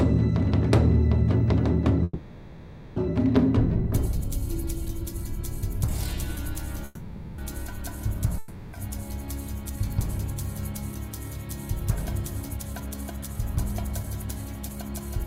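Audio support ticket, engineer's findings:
Call audio freeze, 2.03–2.99 s and 6.85–7.41 s: packet arrival likely stalled, jitter buffer underran. Last sound stretched into a fading buzz for about 0.93 s, then about 0.53 s, the first ending in a brief near-silence. Audio resumes where it stopped, nothing lost, but playout delay grows by the length of each hold.

Long network dropout, 8.38–8.76 s: audio likely stopped arriving. Receiver fills about 0.35 s with a decaying buzz, then audio returns further on, about 0.4 s of it gone for good. The skip trims delay slightly.

Jitter buffer speed-up, 9.69–9.96 s and 12.49–15.20 s: buffer over target after queued packets, receiver dropping short pitch-period chunks repeatedly. Pitch unchanged, pace runs about 13% then 11% fast and sounds hurried, removing roughly 40 ms and 300 ms respectively.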